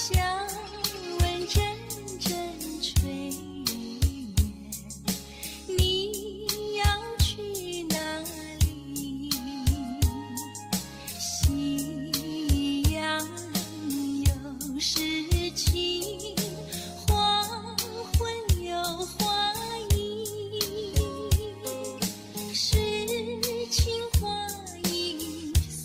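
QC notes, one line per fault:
No faults found. Nothing here needs a timestamp or a note.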